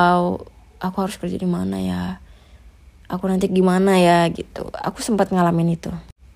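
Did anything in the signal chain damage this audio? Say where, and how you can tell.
No, nothing in the signal chain damaged this audio.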